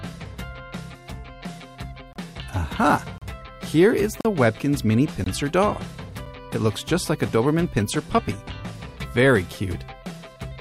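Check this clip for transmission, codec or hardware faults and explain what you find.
There is one fault type: gaps between stream segments, at 2.13–2.16, 3.18–3.22, 4.21–4.25 and 5.24–5.26 s, and briefly at 6.26 and 8.28 s. Segment timestamps spaced about 1 s apart leave holes of roughly 4 to 40 ms that the player fills with silence, so nothing is lost. Each one sounds like a hard-edged dropout. On the waveform it is a flat, near-silent stretch, and on the spectrogram a thin, clean vertical blank.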